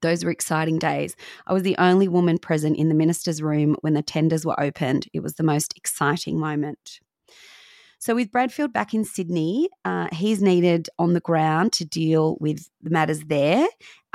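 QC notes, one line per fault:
Nothing stood out on listening to this speech recording.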